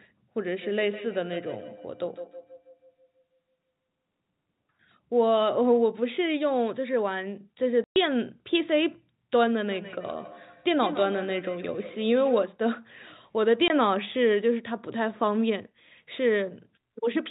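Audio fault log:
0.6–3.86 s and 9.7–12.5 s: feedback echo between two devices. The speech comes back at roughly 150 ms intervals, thinner and more ringing each pass. It peaks about 17 dB, then about 13 dB, below the direct speech. A second device's playback is re-captured by a nearby microphone, and that microphone's own echo canceller cannot remove it, since it only removes what its own device plays.
7.84–7.96 s and 13.68–13.70 s: packet loss filled with silence. Holes of 120 ms and 20 ms cut the speech, with hard edges where the audio drops to silence and resumes. Both lengths fit 20 ms packets, six lost in the first gap and one in the second.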